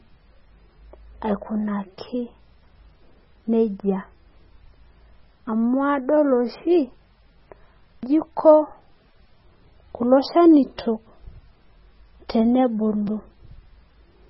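Throughout the speech, the sound is watery and swirly, with no content above 5.6 kHz. The likely cause is heavy MP3 compression, fitting a bitrate near 16 kbps. A spectrogram shows a flat ceiling at 5.6 kHz and weak bands blinking on and off between frames.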